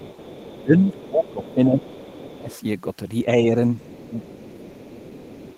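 From the start to 2.56 s there's the other side's voice leaking through, faint, about 25 dB under the talker, likely loudspeaker sound the echo canceller didn't fully remove. It returns at the same low level from 3.8 s to the end. Overlapping that first stretch, 0.53 to 2.55 s, is speech suppressed in double talk. The talker dips in patches by up to about 15 dB, probably because the canceller couldn't separate them from the echo and ducked both. A milder dip of about 5 dB follows at 3.26 to 3.56 s, and another deep one, around 15 dB, runs from 3.9 to 5.15 s.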